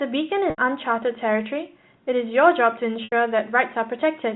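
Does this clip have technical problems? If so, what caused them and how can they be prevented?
Yes. Packet loss with pitch repetition: 80 ms of audio went missing at 0.50 to 0.58 s and again at 3.04 to 3.12 s, which fits four 20 ms packets each time. The receiver filled each gap by repeating the last pitch period. That bridge fades out after about 50 ms, so the sound holds briefly with a buzzy tone, drops to a short silence, and then cross-fades back in. Adding a jitter buffer with forward error correction or packet redundancy on the network link would prevent these gaps.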